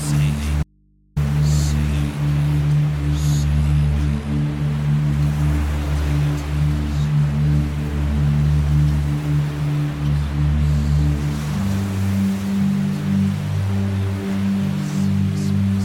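At 0.63 s the sound cuts out abruptly: an audio dropout to a faint residue. For 0.53 s only mains hum remains, roughly 40 dB below the signal. It snaps back at 1.16 s. The signal was likely lost while the input stayed live.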